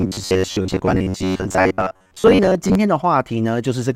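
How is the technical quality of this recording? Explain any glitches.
The quality takes a real hit early on. From about 0.01 s to 2.75 s there's robotic sound from repeated short buffers: the speech turns into a stiff, metallic buzz pitched at about 93.8 Hz that still roughly tracks the words. The likely cause is audio arriving too slowly, so playback keeps looping a tiny chunk, around 10.7 ms, which fits that buzz, for most of the stretch while the real audio gets skipped.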